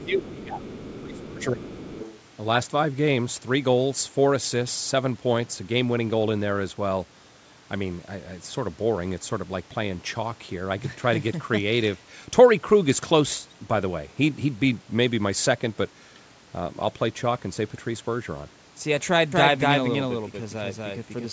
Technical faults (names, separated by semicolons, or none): other side's voice leaking through; speech suppressed in double talk; doubled audio track